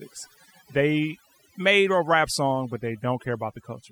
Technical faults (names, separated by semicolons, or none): overdone noise removal